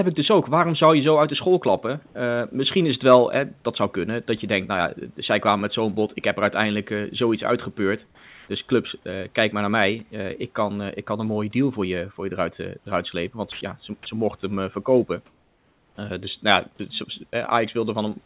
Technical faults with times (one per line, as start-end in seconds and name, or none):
2.06-2.15 comfort noise in place of the background
8.06-8.48 sound dropped by the voice detector
13.52-13.61 sound dropped by the voice detector
15.26-15.98 comfort noise in place of the background